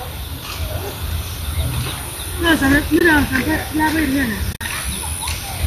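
Speech with AAC frame loss with muting: short soft-edged dropouts at 2.99–3.01 s and 4.53–4.61 s, the second broken up, with its longest gap about 50 ms, consistent with lost 10 ms frames zeroed by the decoder. On a spectrogram these show as full-band vertical blanks, and on the waveform as fade-out-fade-in holes. The light coding roughness is likely from low-delay AAC compression.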